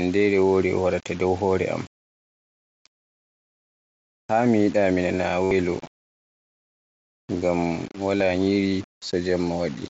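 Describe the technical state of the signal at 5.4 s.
Right around there, from 5.44 to 5.51 s, you get concealed Bluetooth headset packet loss. About 70 ms of headset audio went missing, which points to a run of several lost packets, and the receiver papered over it by looping the last stretch of waveform. So it comes out as a short buzzy tone held at full level, then a little warble as the real signal picks back up.

Underneath that, the whole thing sounds grainy in a way that tracks the signal, with quiet bits turning gritty. That's likely low bit depth without dither, rounded to something like 6 bits, with the error sitting about 25 dB below the signal.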